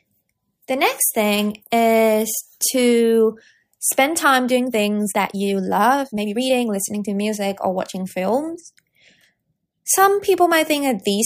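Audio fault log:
4.51–6.67 s: time-stretched section. After "is to spend time" the pace jumps to 1.55 times speed at unchanged pitch, sounding rushed until "listening to music or". Likely software dropped short pieces to shorten it.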